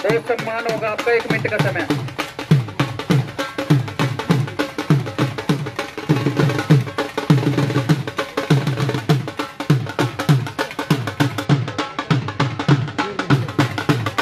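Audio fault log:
11.45–13.33 s, channel delay (comb filtering): one channel lags the other by a few hundredths of a millisecond, which fits a delay of about two samples. When summed to mono, the shared content cancels around 10 kHz, dulling the top end with a fixed notch.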